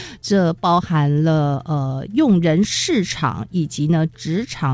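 No faults are audible, and the call-path band-limiting, with nothing above 8 kHz as fits a G.722 wideband link, is normal for that route.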